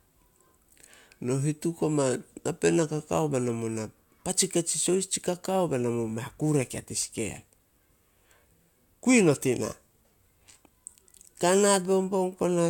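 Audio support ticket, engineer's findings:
Went through the whole speech recording and didn't hear anything worth flagging, so no findings to log on this one.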